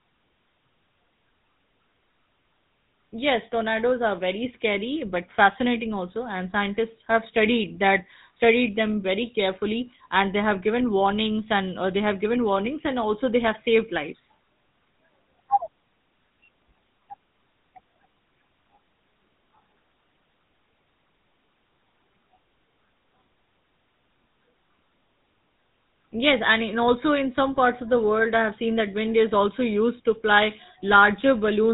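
GSM full-rate codec damage runs through the entire speech clip, plainly audible as a buzzy, gravelly roughness. The vocal tract is rebuilt from a coarse pulse-train excitation, consistent with a 13 kbps full-rate link, and nothing survives above 3.8 kHz, leaving the speech dull and rasping.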